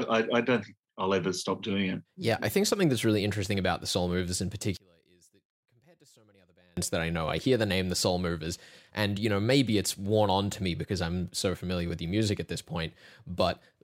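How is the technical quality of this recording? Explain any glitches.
The recording has one clear fault, a dropout in the speech from 4.77 to 6.77 s, lasting about 2.0 s and ending just before "that I know I". Across that stretch the level falls by about 34 dB, leaving only a faint residue. The likely cause is one channel inverted: with one side's polarity flipped, the centred speech shared by both channels cancels on mono summing, so only the small difference between them survives.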